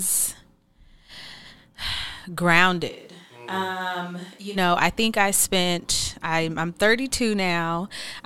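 A speech recording in which, from 2.91 to 4.55 s, starting just before "know I think I", the voice abruptly turns roomy and hollow with less bass, drops by about 10 dB and sits over room noise around 30 dB below it, then snaps back. This is likely a switch to a distant microphone, with the close microphone's signal briefly lost.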